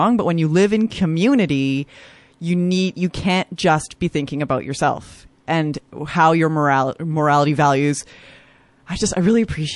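Speech, carrying plainly audible MP3 compression damage for its whole length. The upper band has a watery, swirling quality as weak frequency components drop in and out between frames. Sibilants pick up a metallic chirp and consonant onsets sound smeared. The cause is likely a low-bitrate MP3 encode, with the encoder starved of bits. The amount of damage fits something around 48 kbps.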